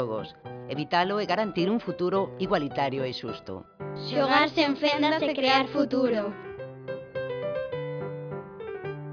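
No dropouts, clicks, distortion or timing faults can be heard anywhere in the recording.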